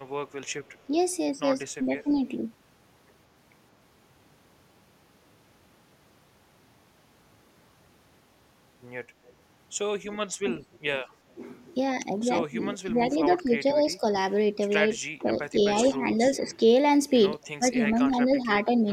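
A far-end echo canceller that likely let part of its loudspeaker pickup through gives this speech recording an echo leak: at 0.47–0.72 s and again at 9.27–9.33 s a faint delayed copy of the voice trails about 176 ms behind, sitting very low, roughly 35 to 40 dB under the speech. The same canceller, likely unable to tell its own talker from the returning echo when both sides spoke at once, turns the speech down as speech suppressed in double talk at 0.87–0.92, 1.78–2.19, 10.38–10.49, 12.5–14.03, 15.19–16.6 and 17.58–18.71 s. Mostly the level sags by around 5 to 10 dB, briefly around 25 dB near 10.4 s.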